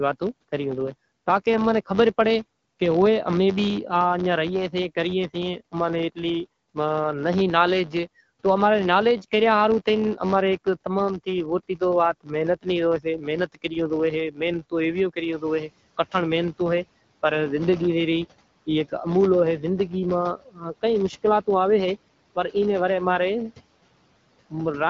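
A steady low buzz near 93.8 Hz runs under the whole speech recording, getting louder and softer with the talker's level. This is a filter restarted on every block: the filter loses its memory at each block boundary and starts again from silence, so every block opens with a small transient. Repeating at that rate, the transients merge into a buzz, which fits a 512-sample block. At 14.31 to 14.40 s a brief piece of speech turns faint and swallowed, dropping by about 11 dB. At 20.37 to 20.63 s a longer stretch is pulled down by about 15 dB. Both are speech cut by the noise suppressor: it mistook quiet parts of the speech for background and attenuated them along with the noise. Around 15.5 s the room noise rises sharply. From 15.32 to 15.67 s that noise passes through with too little reduction and then sinks by about 11 dB over 350 ms. That is the noise suppressor catching up, as its noise estimate needed that long to follow the jump. 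The content stops around 7.5 kHz, consistent with the AMR-WB (HD Voice) wideband codec carrying the call.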